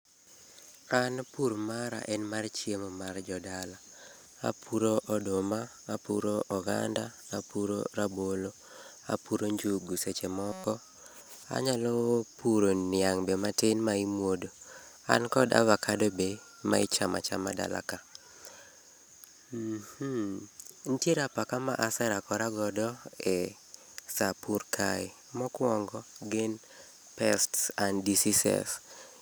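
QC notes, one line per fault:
10.52–10.64 s, system hang loop: right after "apuro njugu seche" the audio freezes on one 5.33 ms slice, which fits a 256-sample buffer, repeated 22 times into a steady 188 Hz buzz. About a tenth of a second of audio is lost. Unlike a dropout, it never goes silent.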